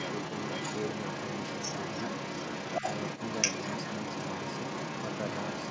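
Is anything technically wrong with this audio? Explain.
Yes, there's a second voice underneath the main speech for the whole clip, 0 to 5.7 s, sitting at roughly the same loudness. That's the other side's voice leaking through, likely from a loudspeaker whose sound the echo canceller didn't fully remove from the mic. The call's mic processing tops out at 8 kHz.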